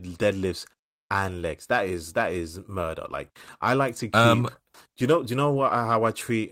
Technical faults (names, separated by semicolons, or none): lost packet rebuilt from error correction